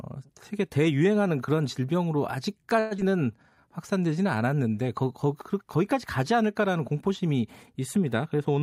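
From 2.79 to 3.00 s a long network dropout is the likely cause: the last sound is stretched into a fading buzz for about 186 ms, never reaching silence, and roughly 80 ms of speech is lost outright, so the speech resumes with a gap rather than a clean pause.

Then, from 3.24 to 3.62 s, a jitter buffer slow-down adds about 73 ms. Speech runs at 83% speed with pitch unchanged, drawn out, unlike a tape-style slowdown that lowers pitch.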